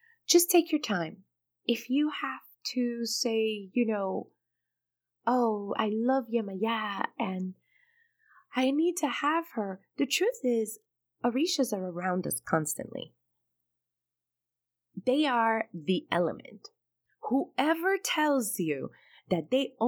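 At 0.71 s the speech and the background noise drop together by about 4 dB in a single step and stay lower for the rest of the clip. This is a sudden gain jump, likely a digital gain change applied between adjacent samples without any ramp.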